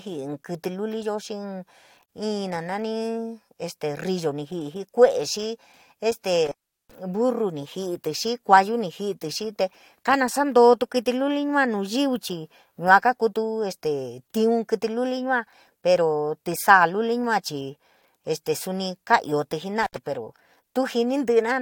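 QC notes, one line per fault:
2.06 to 2.09 s, gap at a join of encoded pieces: a silence of about 32 ms drops into the continuous speech, with abrupt but slightly smeared edges, then the sound resumes where it stopped. Two separately encoded pieces were joined untrimmed, leaving encoder delay and last-frame padding in place.
6.46 to 6.95 s and 19.83 to 19.97 s, intermittent contact: the sound cuts out with crackle at both edges and faint hiss underneath, for about 382 ms and then about 66 ms, the second right after "ka iootí". A loose cable or plug briefly opened the line.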